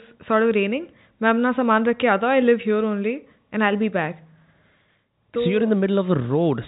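No technical faults are audible.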